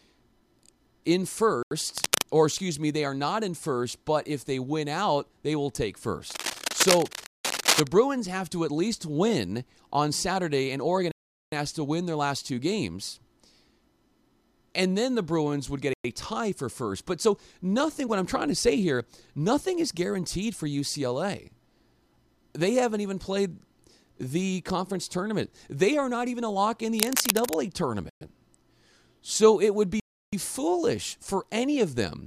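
Speech drops to dead silence for 84 ms at 1.63 s, a Bluetooth stall, likely the headphone buffer running dry while delayed packets were resent. It resumes cleanly rather than fading. Cable scratch noise follows from 1.97 to 2.22 s: dense, uneven rustling at about the speech's level, likely from a worn connector being moved. Unlike a stall, the speech keeps going underneath.

Scratching returns from 6.30 to 7.89 s, between "out they will take" and "have to at least", and a 185 ms stall cuts through it at 7.26 s. Further gaps come at 11.12 s (407 ms, just before "has to win their") and at 15.93 s (109 ms). More scratching runs from 26.99 to 27.54 s. Stalls of 115 ms at 28.10 s and 329 ms at 30.00 s, the second just after "it would", complete the pattern.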